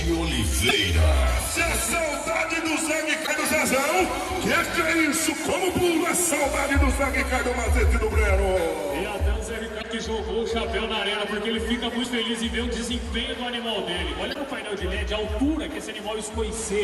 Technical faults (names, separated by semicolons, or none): damaged data in a compressed stream